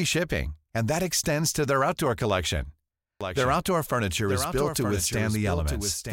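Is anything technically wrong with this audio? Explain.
Yes. A doubled audio track runs from 3.21 s to the end. A second capture path likely mixes in a copy of the speech about 5 dB quieter that cuts in abruptly about a second behind.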